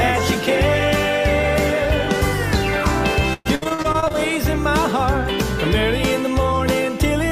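Repeated packet loss hits the audio from 3.33 to 4.15 s. Eleven gaps open in quick succession, the longest lasting 117 ms. Each hole is bridged by extending the preceding sound, covering nearly half that stretch, so it turns choppy and robotic, with fragments dropped.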